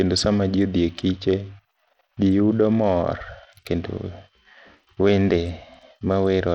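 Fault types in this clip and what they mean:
Bluetooth SBC compression: The whole speech clip carries a gritty, grainy roughness, and the upper treble comes and goes rather than staying steady, with aliasing riding on the sound. This is most likely SBC coding over a narrow Bluetooth link, where a tight bit budget, fitting roughly 80 kbps, starves the top sub-bands and coarsely quantises the rest. Unlike a clean low-pass filter, the high end flickers and grit sits inside the voice itself.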